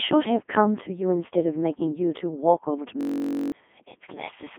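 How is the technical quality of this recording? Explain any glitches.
Technical quality is poor: the whole recording passes through a very low-bitrate vocoder, and one glitch near the end freezes the sound into a buzz.

Codec 2 vocoder, throughout: the decoder rebuilds speech from pitch, voicing, energy and a spectral envelope using sine-wave synthesis instead of preserving the waveform. The damage is heavy. The speech sounds robotic and buzzy, sits in a narrow band of roughly 250 Hz to 3.5 kHz, and has nothing above 3.6 kHz. This fits Codec 2's top 3.2 kbit/s mode.

System hang loop, 3.01 to 3.52 s: the computer or driver stalled while the audio hardware kept replaying the same short stretch of its ring buffer. A 21.33 ms fragment repeats about two dozen times, which fits a 1024-sample buffer. At that length the loop merges into a steady buzz at 46.9 Hz instead of a stutter, and about half a second of the real speech is lost.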